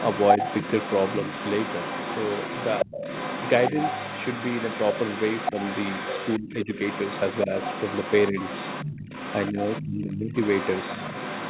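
Other side's voice leaking through runs from 0.0 to 6.39 s, at about 10 dB below the main speech. The far talker's sound, likely played from a loudspeaker and left behind by the echo canceller, sits underneath as a second voice. Speech suppressed in double talk follows at 6.39 to 6.68 s. With both sides active, the canceller likely pulled everything down rather than risk passing echo, so the speech sinks by roughly 20 dB. The leak returns from 6.57 to 9.86 s at about 10 dB down. Inside that stretch, brief suppression dips hit at 8.31 to 8.36 s (about 5 dB) and 9.51 to 9.58 s (about 10 dB). The deepest gating comes from 9.84 to 10.33 s, about half a second at roughly 25 dB down. A faint echo scrap at about 20 dB down slips through at 10.11 to 10.15 s. The leakage then resumes from 10.31 s to the end at about 10 dB below the speech, all within the narrow 4 kHz band of the G.711 call path.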